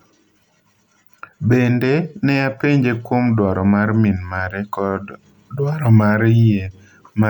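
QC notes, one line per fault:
No faults heard anywhere in this speech recording.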